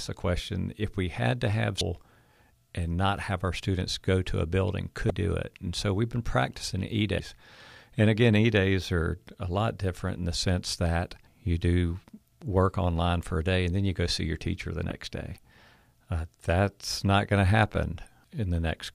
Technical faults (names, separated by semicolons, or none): damaged data in a compressed stream